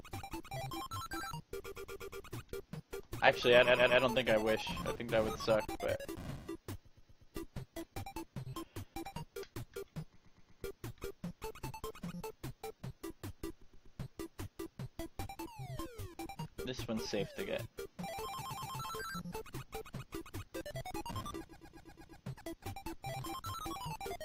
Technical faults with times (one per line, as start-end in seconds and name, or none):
1.65-2.25 repeated frames
3.65-4.01 repeated frames
6.85-7.33 repeated frames
10.15-10.63 repeated frames
13.61-13.97 repeated frames
18.41-18.77 repeated frames
21.49-22.21 repeated frames